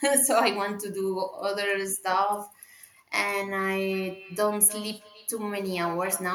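Speech clip with feedback echo between two devices from 3.93 s to the end: repeats return at roughly a 300 ms interval, about 19 dB below the speech, thinning and ringing, unlike a single room echo.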